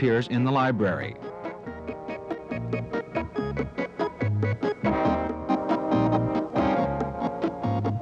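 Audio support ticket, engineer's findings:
Likely one channel drops out upstream of the mono sum; level falls abruptly by about 6 dB, 2.33–2.39 s and 5.28–5.50 s.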